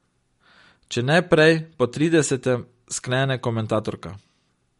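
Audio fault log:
Throughout, MP3 compression, likely: the speech sounds watery and swirly, with nothing above 11.2 kHz. The encoder is short of bits, so it cuts the treble at a fixed point and weak detail flickers frame to frame, which fits about 48 kbps.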